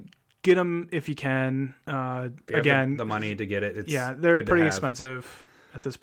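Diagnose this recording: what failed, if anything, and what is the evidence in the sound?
The network dropped packets here. At 4.33 to 4.42 s there's a burst of packet loss: the receiver stretched the last bit of sound across a 60 ms hole, fading it out, then picked up 60 ms further on, so that stretch of speech is simply gone.

The network trouble comes back from 4.87 to 5.86 s as repeated packet loss, which gives that choppy, robotic sound. Four separate gaps, none longer than 60 ms, were each patched by continuing the previous sound, covering about 240 ms or roughly a quarter of that span.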